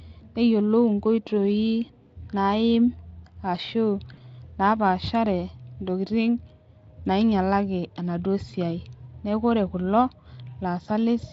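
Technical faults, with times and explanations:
4.13–4.20 s, VoIP packet loss concealed by the speech codec: about 40 ms of audio, consistent with two lost 20 ms frames, is rebuilt by the Speex decoder, which repeats its last pitch and spectral envelope while lowering the level. Unlike a plain dropout, there is no silent hole. The sound smears into a brief buzzy tone or coloured noise that fades, and because each decoded frame builds on the previous one, it stays weak or distorted for tens of milliseconds or more after real packets resume.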